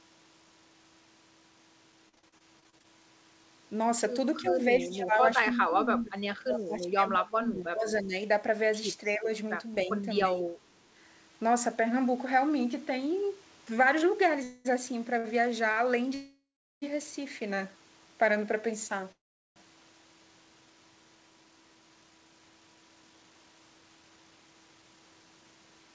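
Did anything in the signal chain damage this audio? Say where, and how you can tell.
Yes. In the network stage, between 1.92 and 2.86 s, the speech turns choppy and robotic. There are 11 separate holes, none longer than 42 ms, and together they make up about a quarter of that stretch. This is repeated packet loss: each hole is bridged by extending the preceding sound, and another loss follows before the sound recovers.

In the call processing stage, from 4.42 to 4.53 s, a faint copy of the talker returns 300 ms late, about 15 dB below the direct speech. This echo leak likely comes from a far-end loudspeaker whose echo canceller did not fully remove the microphone pickup.

Also in call processing, the speech dips or loses level at 4.42–4.58, 4.78–5.20, 5.49–8.13, 9.15–9.29, 9.85–10.05 and 10.25–10.54 s. The deepest drops are around 20 dB, in the long middle stretch and the last one. This is speech suppressed in double talk, likely the echo canceller turning both sides down during overlap.

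In the jitter buffer, from 12.18 to 13.13 s, the speech runs about 6% fast at unchanged pitch and sounds slightly hurried. Roughly 70 ms of audio is removed in small pitch-period pieces. This jitter buffer speed-up trims excess buffered delay.

Call audio freezes occur at 14.43–14.67, 16.15–16.84 and 19.12–19.58 s. Each time the sound is held as a fading buzz, and the two longer ones fall to silence for about 0.4 s. The audio then resumes where it stopped with nothing lost. The likely cause is the jitter buffer running dry while packets were held up in transit.

From 14.71 to 17.78 s the buffer rebuilds its reserve with a jitter buffer slow-down. It repeats pitch periods to add 52 ms, so the speech runs at 99% speed and some sounds are slightly drawn out.

Two short stalls from late packets occur at 15.18–15.26 and 15.72–15.79 s. In each, the last sound is held for 61 ms and then 46 ms with a slight buzz, after which playback continues from the same point with nothing lost. 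Across the clip, the G.722 call path cuts everything above 8 kHz.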